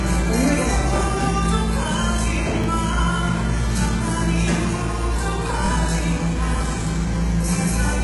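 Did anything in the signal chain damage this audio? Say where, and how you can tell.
Yes. Throughout the clip the treble sounds synthetic: the top end stays bright but has a gritty, metallic sheen, as if its detail doesn't belong to the sound beneath it. Nothing reaches above about 11.5 kHz. The likely cause is HE-AAC compression at the codec stage, heavily damaged at a bitrate that sounds very low, which fits roughly 12 kbps. The codec keeps only the lower spectrum and fills the upper band with shifted copies, so the harmonics up there don't line up with the real ones.

Two short stutters occur, at 2.64 to 2.66 s and at 5.66 to 5.69 s. Each sounds like a tiny click where a fragment plays twice. The three-second spacing points to overlapping chunks at the buffer or processing stage. The audio was handled in three-second blocks, and each block began about 25 ms before the previous one ended, so 25 ms of sound is repeated at every join.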